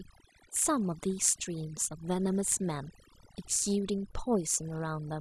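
From start to finish the speech carries overdone noise removal. A noise reduction stage has been set far too aggressively, so any frequency band that sits close to its noise estimate is pulled right down or switched off, and the quieter parts of the voice are removed along with the noise. Between phrases the background collapses to near silence dotted with twinkling, chirpy specks.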